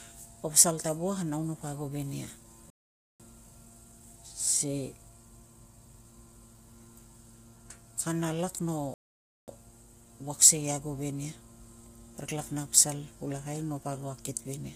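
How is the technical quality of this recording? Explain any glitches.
Technical quality is fair to poor: the speech has a steady coded roughness, and it cuts out twice.

Low-delay AAC compression runs through the whole clip. The voices sound grainy, with noise between the harmonics and a lowered, synthetic-sounding top band. That's likely AAC-ELD's short frames resolving pitch poorly, with the damage level fitting a bitrate around 32 kbps.

Playback stalls hit at 2.70 to 3.20 s and 8.94 to 9.48 s, right after "kana lak no". Each time the sound drops to silence for about half a second mid-flow, then carries on. That's likely the player running dry or its thread getting blocked.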